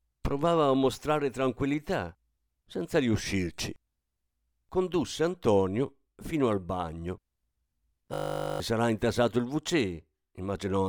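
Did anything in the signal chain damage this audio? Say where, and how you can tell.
Yes. A system hang loop at the driver or buffer stage runs from 8.14 to 8.6 s, just before "sarà intasato il". It sounds like a steady 50 Hz buzz instead of speech: a single 20 ms slice of audio repeats exactly and back to back, which fits a 20 ms ring buffer. The driver or host stalled while the sound hardware kept replaying that same buffer. When output resumed, about half a second of speech was missing.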